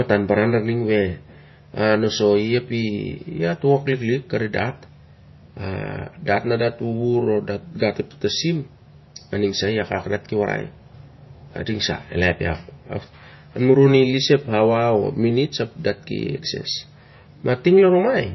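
Watery, swirling speech runs the whole way through, with s sounds turning metallic and chirpy and nothing above 5.8 kHz. The likely cause is heavy MP3 compression: the encoder cuts the treble at a fixed frequency and bit-starved frames toggle weak frequency lines, which fits a bitrate around 25 kbps.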